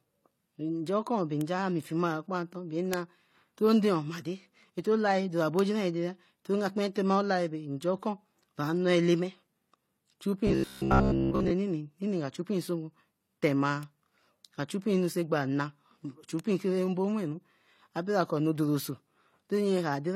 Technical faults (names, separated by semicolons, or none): transcoding between lossy codecs; bit error spike; robotic sound from repeated short buffers